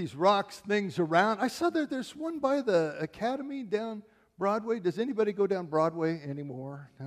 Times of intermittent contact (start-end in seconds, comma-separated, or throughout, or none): none